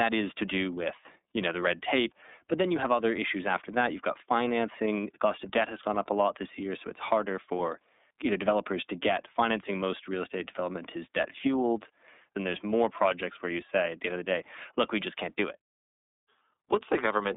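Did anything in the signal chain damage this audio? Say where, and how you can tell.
Yes, iLBC codec damage runs throughout the speech. Nothing passes above 3.8 kHz, the line band sits at about 250 Hz to 3.7 kHz, and the voice sounds clearly rough and synthetic, which fits the 13.33 kbps mode coding each 30 ms frame independently.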